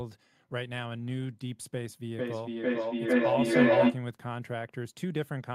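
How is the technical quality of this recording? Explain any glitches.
The recording has one serious glitch. From 2.18 to 4.09 s there is feedback echo between two devices: speech returns about every 0.4 s, thinner and ringing, and builds to about 11 dB above the speech itself. A second device on the call replays this microphone's signal, which is picked up again, and neither echo canceller removes the other device's output.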